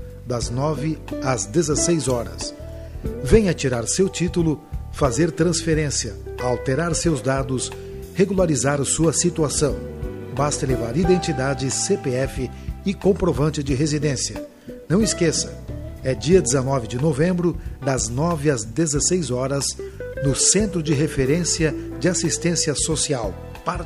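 Nothing technical trips up this recording at any point; there's simply no fault to report here.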